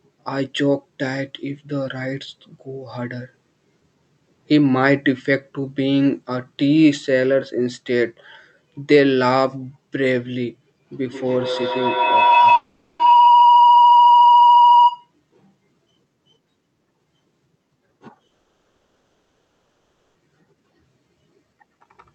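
From 11.01 to 15.11 s a feedback howl builds near 1 kHz, pulsing about every 150 ms and peaking about 6 dB above the speech. On a spectrogram it is a bright, narrow horizontal band that thickens over time. Within it, from 12.55 to 13.01 s, a 440 ms gap is filled with decaying buzz, likely a long network dropout. A second gap, from 18.27 to 20.20 s, loses 1.9 s: a fading synthetic tail, then 530 ms of flat, empty waveform.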